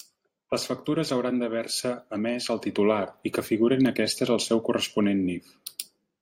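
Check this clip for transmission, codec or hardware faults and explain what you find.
No fault can be heard anywhere in the speech. There is nothing here to point to or explain.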